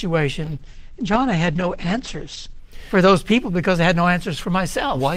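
From 0.49 to 2.71 s there is a call bitrate drop. The sound turns muffled and rough. Highs above about 8 kHz vanish, which fits an encoder falling from about 48 to 10 kbps.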